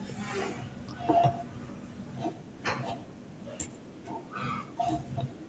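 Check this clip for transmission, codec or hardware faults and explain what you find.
One fault runs through the whole clip: echo with no canceller. Every phrase is followed by a fainter, thinner copy, about a tenth of a second behind. It sits about 15 dB below the direct speech. The far end played the call through a loudspeaker, and its microphone picked that sound up again. No echo canceller removed it. So the speech returned after the network round trip. Nothing is heard above 8 kHz, which fits the band limit of a wideband Opus call path.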